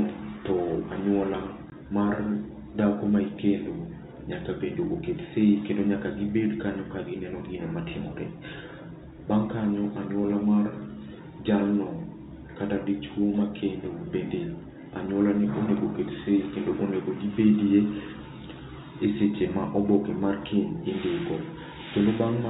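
At 1.70 to 1.72 s, a stretch of speech never reached the receiver, and packet loss filled with silence left a 20 ms hole, which fits a single lost packet. The speech drops out abruptly with hard edges, inside the 4 kHz telephone band of the G.711 coding.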